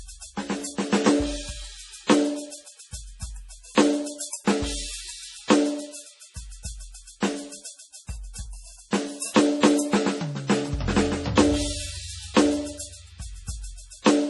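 Throughout, the music is band-limited to nothing above 11.5 kHz and sounds watery and swirly, heavy damage that likely comes from MP3 compression at around 32 kbps.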